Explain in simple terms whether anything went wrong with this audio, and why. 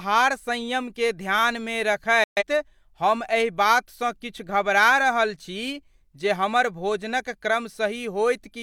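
Something did go wrong, at 2.24 seconds. The speech cuts out almost instantly and stays silent until 2.43 seconds, a gap of about a fifth of a second. This is a digital broadcast dropout. The receiver stopped getting good data, so it muted the sound rather than play garbage. When clean data returned, the speech came back. The sound sent during that gap is gone for good. The length fits a few lost frames.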